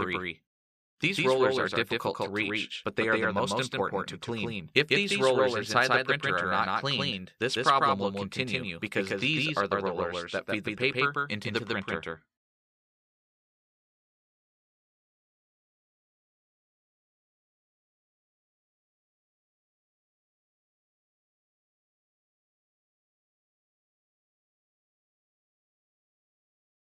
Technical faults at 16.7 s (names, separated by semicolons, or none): doubled audio track